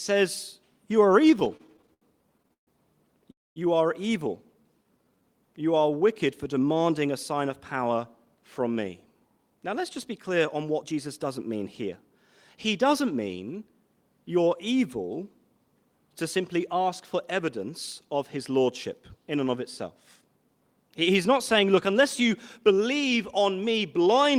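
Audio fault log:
1.21–2.69 s, repeated stalls (stutter): the speech catches and drags in a run of 18 brief hitches, each holding the last sound before moving on, the longest near 137 ms. About a quarter of this stretch, 376 ms in all, is filled-in sound, yet nothing is lost. Packets kept reaching the receiver late, so its jitter buffer emptied over and over and each wait was patched by extending what had just played.
3.31–3.58 s, call audio freeze: the sound halts for 249 ms. A short trailing buzz fades into about 220 ms of silence, and then the speech resumes exactly where it stopped, with nothing skipped. The likely cause is packets being held up in transit until the jitter buffer ran dry. The receiver stretched the final sound and then waited, and that inserted pause adds 249 ms of delay to everything after it.
4.54–5.22 s, jitter buffer slow-down: the speech drawls at about 86% of its normal rate while keeping its pitch, with sounds drawn out. 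The receiver repeated single pitch cycles and bits of pause many times in a row to rebuild a low buffer, adding 101 ms.
7.06–11.38 s and 22.61–23.40 s, jitter buffer speed-up: the speech hurries along at about 106% of its normal rate with unchanged pitch. The buffer held more audio than it aimed for, so the receiver repeatedly cut out short pieces a pitch period or so long. That trims roughly 300 ms in the long first stretch and around 50 ms in the brief second one, which pulls the delay back down.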